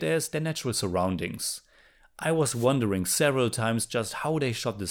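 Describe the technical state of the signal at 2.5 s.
A wireless microphone noise hit runs from 2.52 to 2.67 s. The analogue FM radio link fades as reflected signals cancel, so receiver noise rises and breaks through, heard as a brief swish of static lasting about 0.15 s over the speech.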